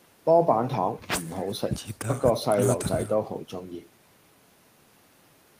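No technical faults can be heard in this recording.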